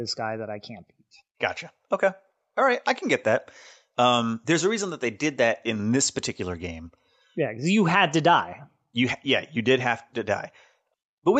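Nothing's wrong with this speech clip, which just sounds like it came through an ordinary call, with the mic processing and call codec band-limiting it so there's nothing above about 8 kHz.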